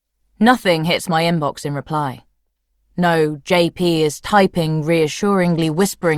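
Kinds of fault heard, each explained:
Bluetooth SBC bit pool drop: From 5.45 s right to the end, the link seems to have got congested, and the sender cut the SBC bit pool to keep the stream going. With fewer bits to share, the top sub-bands get little or nothing and the rest are quantised coarsely, so the treble goes dull and a gritty noise creeps in. It doesn't recover before the clip ends, and the drop fits a fall from a bit pool of 28 to about 13, around 102 kbps.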